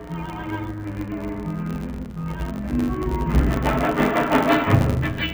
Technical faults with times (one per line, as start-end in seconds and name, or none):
0.00-5.34 interleaved audio read as planar